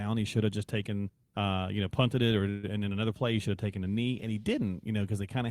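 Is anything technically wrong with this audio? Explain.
Yes. From 2.49 to 2.73 s the speech stops advancing and the last sound is drawn out as a brief fading buzz for about 139 ms. Then the speech picks up exactly where it left off, with nothing skipped, just shifted later. This is a call audio freeze, likely caused by packets held up in transit. The jitter buffer ran dry, the receiver stretched the final sound to cover the wait, and the late packets then played in order.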